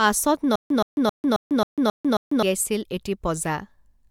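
From 0.56 s to 2.43 s the speech catches and repeats: a fragment of about 123 ms plays, then about 146 ms of dead digital silence follows, and the same fragment returns every 269 ms, seven times over. This is stutter with silent gaps. The likely cause is a stalled player or stream replaying its last buffered chunk on each retry before running dry, so the speech that belonged in that stretch never arrives.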